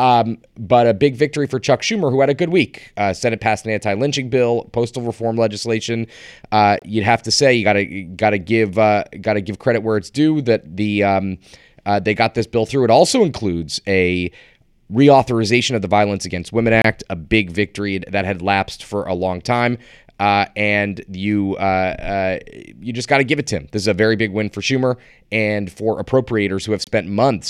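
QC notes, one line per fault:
6.79–6.82 s, 16.82–16.84 s, 26.84–26.87 s: gap between chunks. The speech stops for about 25 ms at each point where one 10 s block of audio meets the next. The hole has abrupt edges and nothing is missing, so the speech pauses and then resumes.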